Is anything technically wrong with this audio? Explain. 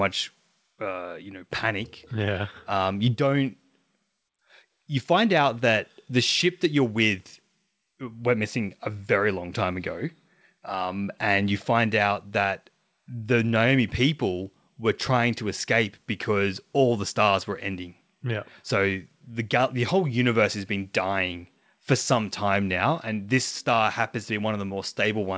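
No, this speech has passed through a call path working as expected, with a band limit at 8 kHz and the mild coding texture that fits a wideband call codec such as G.722.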